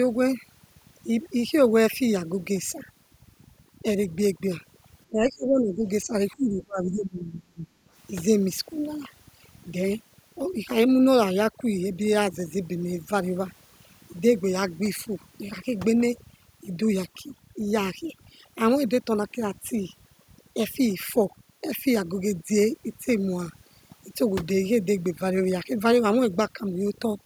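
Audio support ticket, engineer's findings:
Overdone noise removal, whole clip. Background gated to near silence with twinkling specks. Noise suppressor set too aggressive, zeroing individual bands near its noise estimate and taking quiet speech detail too. Spectrogram: black floor, isolated flickering bins, ragged harmonic edges.

Speech suppressed in double talk, 5.07–6.13 s and 6.36–7.67 s. Talker dips about 20 dB, then about 30 dB. Likely echo canceller attenuating during double talk. Waveform: envelope collapses.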